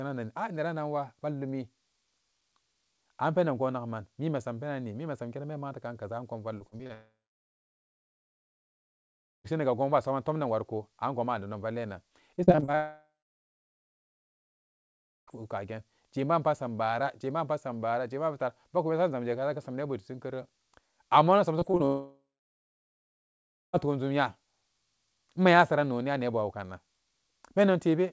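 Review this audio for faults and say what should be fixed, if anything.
The speech turns choppy and robotic in three short bursts of repeated packet loss (robotic sound): 6.58 to 6.91 s with five holes, the longest 34 ms; 12.36 to 12.75 s, just after "angonma a nedon vallinan", with eight holes up to 36 ms; and 21.59 to 21.82 s with three holes. Packets went missing or arrived late in quick succession. Each hole was patched by stretching the previous sound, so roughly a third of each span is synthetic filler. Steadier network delivery, with forward error correction or a deeper jitter buffer, would prevent it.

Each burst runs straight into a long network dropout, and the audio vanishes. A brief fading buzz gives way to silence from 6.93 to 9.46 s, with speech returning at "gon bo a saman", from 12.75 to 15.29 s, and from 21.86 to 23.75 s before "toon jum". That is about 2.5 s, 2.5 s and 1.9 s of lost audio, most of it plain silence after the concealment dies out, likely because the connection stalled entirely and those packets never arrived. 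The 8 kHz ceiling comes from the G.722 call codec. The fix is a more reliable network link, or redundancy that can ride out multi-second stalls.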